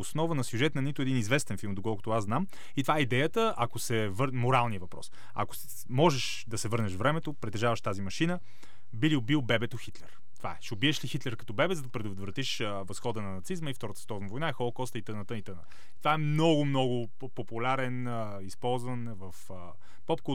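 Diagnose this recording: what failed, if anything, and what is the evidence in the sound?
The speech itself carries no audible defect from this fault, because a DC offset is silent. It shows up as steady energy at 0 Hz for the entire recording, and the waveform sits displaced from the centre line by a constant amount of about -33 dBFS. The stage is most likely the analogue-to-converter front end, where a fixed voltage bias is digitised along with the signal. That shift eats a little headroom on one polarity and can produce clicks at edits or fades.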